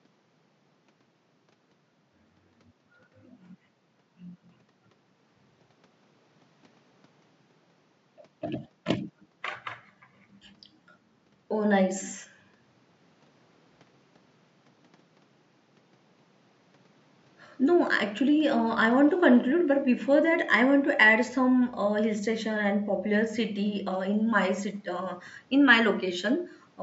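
Nothing goes wrong anywhere in this speech recording, and the only thing under it is faint room noise sitting about 39 dB below the speech.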